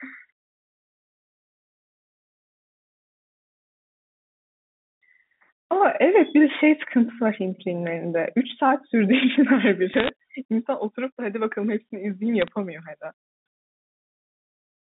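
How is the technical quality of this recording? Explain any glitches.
The recording has two short bursts of crackle, both bit errors on a digital phone line. The first runs from 9.93 to 10.09 s, the second from 12.42 to 12.48 s. A few tenths of a percent of bits were flipped. Each flip corrupts one sample, and hits on high bits give sharp ticks over the speech. The path is G.711 telephone coding, so the sound stays within about 150 Hz to 3.7 kHz.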